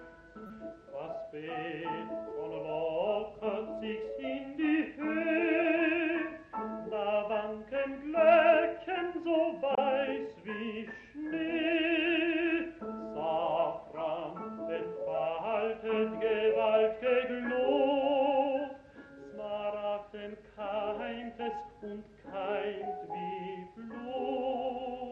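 At 0.47 s and 9.74 s, a corrupt frame decoded: each single damaged frame plays as a brief burst of energy at the wrong frequencies, faint at first, much louder (about -15 dBFS) the second time, showing as a short misplaced spectrogram smear.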